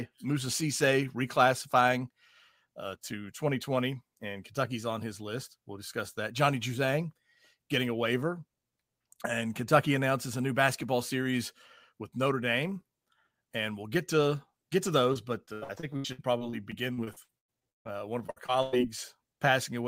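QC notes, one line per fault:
15.13–17.93 s, repeated packet loss (robotic sound): after "get to get to", speech turns choppy with pieces missing until "one of". Around 19 short dropouts, the longest 151 ms, are bridged by stretching the preceding sound, so nearly a third of the stretch is synthetic fill.
18.27–18.74 s, repeated packet loss (robotic sound): just after "one of", a brief burst of choppy sound returns. Four quick dropouts, the longest about 102 ms, are again covered by repeating the last sound, leaving roughly 41% of this short span concealed.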